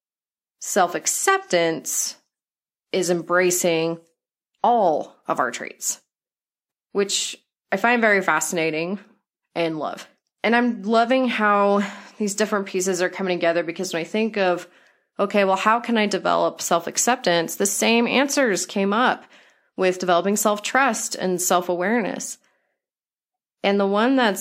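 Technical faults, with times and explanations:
No technical faults found anywhere in the speech recording.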